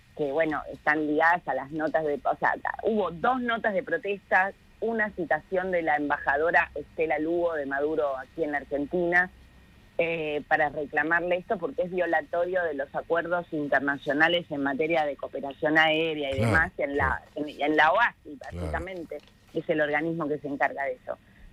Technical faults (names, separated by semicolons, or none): block size mismatch (truncated)